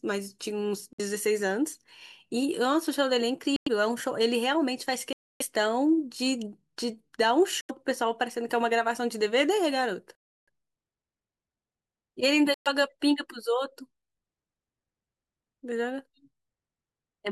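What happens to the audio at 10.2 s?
The speech drops to silence from 10.15 to 10.48 s, then resumes. This is a Bluetooth stall, likely interference delaying packets until the headphone buffer ran dry.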